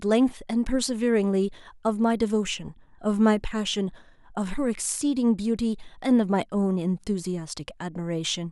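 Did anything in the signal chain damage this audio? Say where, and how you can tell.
No, nothing in the signal chain damaged this speech.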